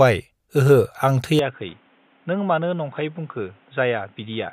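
At 1.39 s the speech abruptly turns dull and boxy and stays that way to the end, with no gap at the transition. Everything above 3.8 kHz disappears, the level falls by roughly 10 dB, and a new noise floor appears some 30 dB under the signal. This is likely an input switched to a poorer device. On a spectrogram the upper band is cut flat at 3.8 kHz, and the waveform steps down in height at that instant.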